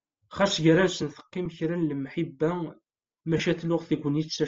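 Throughout the speech, a low-bitrate transform codec has dropped much of the upper spectrum and filled it with noise, likely Bluetooth LC3 compression; the damage fits 7.5 ms frames at around 32 kbps. The voice carries a plainly audible breathy, grainy edge.

At 1.45 s, lost LE Audio frames interrupt the stream: a 7.5 ms gap, consistent with a single dropped frame, is patched by repeating the previous spectrum with scrambled signs, heard as a brief noisy blip. From 3.37 to 3.40 s, a longer 22.5 ms loss, fitting three frames, smears the sound into a short hiss.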